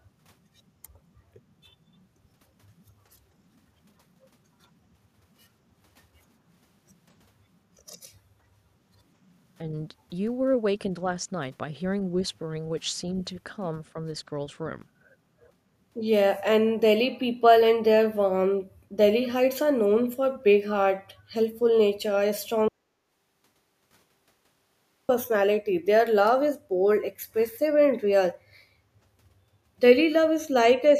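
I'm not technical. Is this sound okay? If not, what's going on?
No, not quite. At 22.68 seconds the speech stops dead and there's total silence, not even background hiss, until 25.09 seconds. That's an audio dropout to silence, about 2.4 seconds long, likely from the input briefly disconnecting or muting while recording continued.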